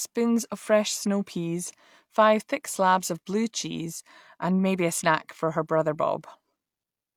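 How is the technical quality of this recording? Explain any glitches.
No technical glitches can be heard anywhere in this speech recording. Nothing in the audio stands out as a fault that would need explaining.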